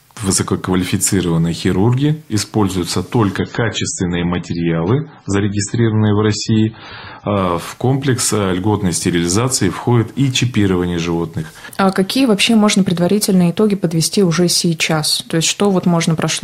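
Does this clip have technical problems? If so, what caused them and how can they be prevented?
Yes. From 3.37 s to 7.37 s an adaptive stream drops to a lower bitrate: quality falls abruptly with no gap, nothing survives above 8.3 kHz, and artefacts thicken. This points to a switch from roughly 128 kbit/s to 16 kbit/s MP3 while throughput sagged. A larger playback buffer or a higher minimum bitrate rung would prevent it.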